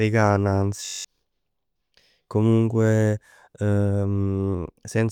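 From 0.85 to 1.05 s a system hang loop occurs: the system stalled while the sound hardware kept replaying one 21.33 ms stretch of speech, which fits a 1024-sample buffer, nine times. This produces a steady 46.9 Hz buzz and loses about a fifth of a second of audio.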